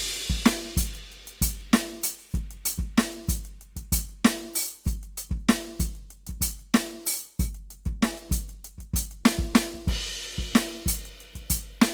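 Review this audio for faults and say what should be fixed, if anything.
Grainy, rough texture runs through the music from start to finish, with tones turning noisy. It is likely Opus compression in its music (CELT) mode. Band energies survive, but fine detail is rebuilt from folded or noise content. Bandwidth stays full, to about 20.3 kHz. The plainly audible damage fits a low bitrate near 24 kbps. Prevent it by encoding the music at a higher Opus bitrate.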